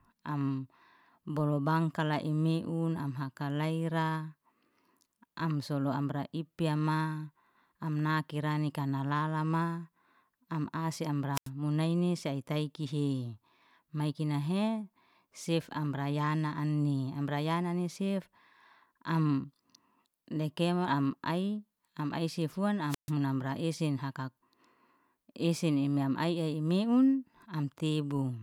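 Wireless microphone squelch dropouts occur at 11.33–11.49 s and 22.88–23.12 s. The radio signal fades, hiss rises, then squelch mutes the speech for 86 ms and 137 ms.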